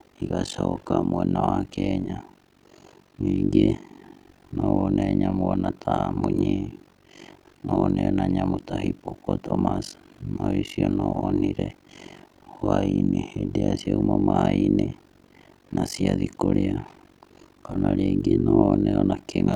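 Speech throughout carries overlap-add ripple: frames were recombined with an overlap that doesn't sum to constant gain, so the level dips about 60 dB around 50 times a second, a fast flutter. Unlike dropouts, the pulsing is perfectly regular and never leaves true gaps.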